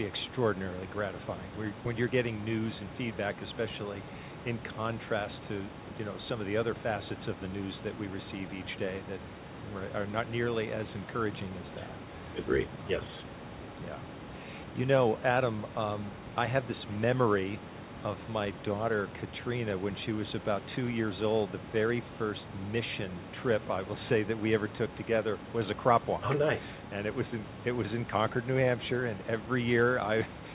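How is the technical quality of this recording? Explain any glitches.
No glitches to report: the speech is band-limited to nothing above 4 kHz, which fits a 64 kbps G.711 mu-law call codec, and the room noise sits about 15 dB below it.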